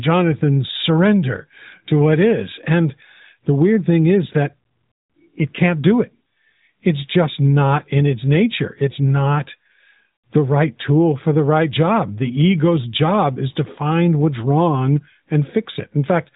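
Speech over an AMR narrowband mobile codec path, with nothing passing above 4 kHz and only light coding damage that fits the 12.2 kbps mode; no technical faults present.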